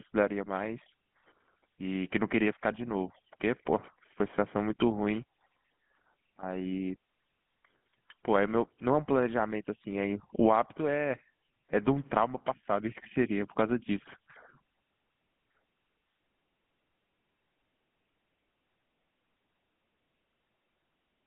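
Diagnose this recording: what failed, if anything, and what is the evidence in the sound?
GSM full-rate codec damage, present throughout: the speech carries a plainly audible buzzy, gravelly roughness and nothing above 3.8 kHz, within a 150 Hz to 3.4 kHz line band. The codec stage modelled the vocal tract and drove it with sparse regular pulses, which fits a 13 kbps GSM full-rate link.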